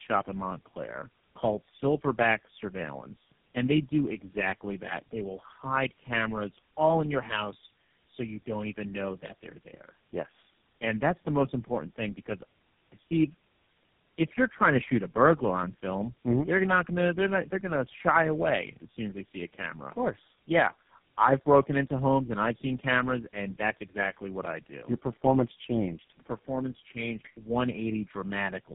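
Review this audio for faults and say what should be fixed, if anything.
Tandem speech coding runs through the whole recording: the sound passes through three speech codecs in a row, each re-encoding the previous one's damaged output, so roughness and warble compound. Nothing reaches above 3.8 kHz. Unlike a single low-rate codec, the artefacts are layered. Prevent it with transcoder-free operation, passing the original coded stream end to end.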